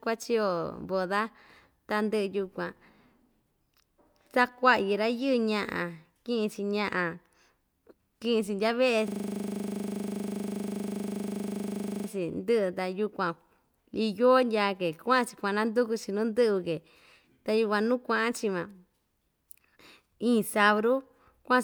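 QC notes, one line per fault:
9.08–12.08 s, system hang loop: a single 40 ms slice of the speech repeats exactly, 75 times in a row, at a rate of 25 Hz. The result is a rapid, rattling stutter with a buzz-like pitch at the loop rate. The host or driver stopped delivering new samples while the output hardware kept replaying its ring buffer, which fits a buffer of about 40 ms. Playback then resumes with little or no audio lost.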